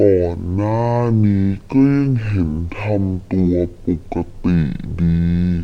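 From start to end, the speech is a stereo stream read as mono: left and right samples are taken in turn as one channel, so it plays at half speed and an octave low. A faint mirror image in the upper spectrum separates it from a plain sample-rate mismatch.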